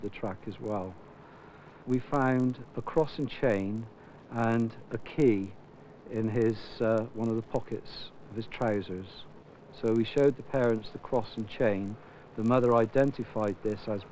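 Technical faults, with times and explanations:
Throughout: resampler restarted on every block. Each 20 ms block, which fits a 48 kHz to 16 kHz conversion, is converted without its neighbours, leaving an error at every edge. The result is a 50 Hz buzz that, unlike mains hum, stops whenever the signal does.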